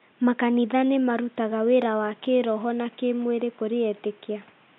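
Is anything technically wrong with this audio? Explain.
No, nothing here sounds technically wrong; there's just a bit of quiet room noise sitting about 34 dB below the speech, which is part of the recording space rather than anything the system did.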